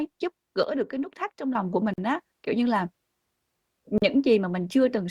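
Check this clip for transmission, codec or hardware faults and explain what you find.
Two kinds of fault are present. From 0.63 to 1.55 s, one channel drops out, likely a lost stereo channel: after the mono sum, the speech falls abruptly by about 6 dB, then recovers. At 1.94 to 1.98 s and 3.98 to 4.02 s there is a gap at a join of encoded pieces. Two-second segments were encoded separately and joined untrimmed, so encoder delay and padding leave silences of about 44 ms and 40 ms with smeared edges.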